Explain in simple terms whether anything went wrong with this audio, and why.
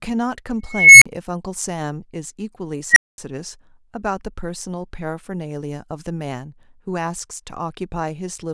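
Something went wrong twice in this speech clip, both times from an unstable filter. At 0.67 to 1.06 s, a high whistle of roughly 2 kHz swells over about 0.34 s until it distorts, then drops into 40 ms of silence. At 2.90 to 3.18 s it happens again, growing in just 62 ms before 220 ms of silence. Unlike microphone feedback howl, the tone runs away inside the processing and ends in a sudden dropout.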